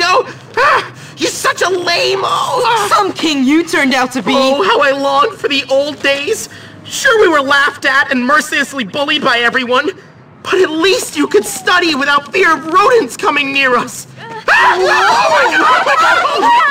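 No technical faults can be heard anywhere in it.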